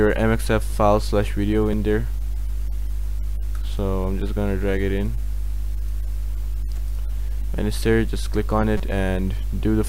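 Two repeated buffer faults break up the audio. At 1.73 s one 5.3 ms slice plays twice, a tiny click. At 8.77 to 8.80 s the same slice plays five times in a row, a brief buzz. In each case fresh samples arrived late, so the device replayed its last block, which fits a 256-sample buffer. On a waveform this shows as identical copied segments with hard joins, and on a spectrogram as thin vertical lines with a faint comb around 190 Hz.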